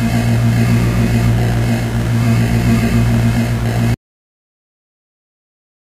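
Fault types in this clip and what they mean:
Audio dropout to silence: The sound stops abruptly at 3.94 s and never returns. The last 2 seconds are silence with no background noise at all. This likely means the input was lost while recording continued, writing silence to the end.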